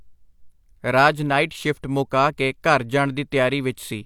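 No technical faults can be heard anywhere in the speech recording.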